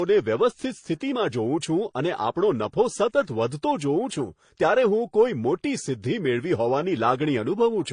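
Speech with transcoding between lossy codecs throughout: nothing sounds above 9.8 kHz, and smeared, swirly high-band artefacts sit alongside MP3-style warbling and pre-echo. A single codec wouldn't stack two distinct artefact types. This likely comes from HE-AAC at around 24 kbit/s re-encoded as MP3 near 48 kbit/s.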